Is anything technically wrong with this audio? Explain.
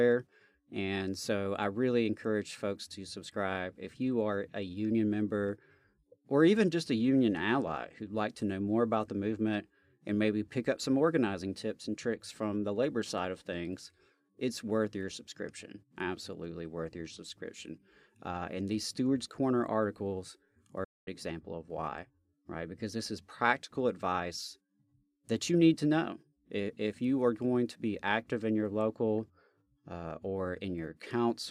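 Yes. Digital broadcast dropout at 20.84 to 21.08 s: the receiver muted when valid frames stopped arriving, so the speech cuts to silence for 0.24 s after "articles are".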